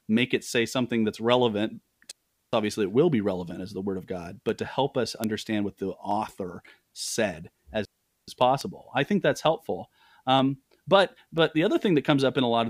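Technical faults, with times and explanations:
2.11–2.53 s and 7.85–8.28 s: digital wireless dropout. The sound cuts to near silence for about 0.42 s and 0.43 s, then resumes. The receiver muted when too much link data was lost. Unlike an analogue dropout, there is no noise burst or hiss at either edge, just a clean hole with very short fades.
3.47, 4.49, 6.11, 7.08, 8.42, 10.39 and 11.38 s: dropped samples. Each is a single sharp click, likely from a fraction of a millisecond of samples missing, so the waveform jumps ahead. The one at 4.49 s falls between "the word of god" and "to help us", and the one at 6.11 s just after "what the". The click is too brief to remove any audible sound, which separates it from a dropout.
5.24 and 8.61 s: bit error spike. One corrupted sample jumped by a power of two and returned, giving one sharp broadband tick unrelated to the speech. The second comes just before "i think that's helpful". 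Unlike dropped samples, nothing is skipped: the waveform spikes and snaps back to where it was.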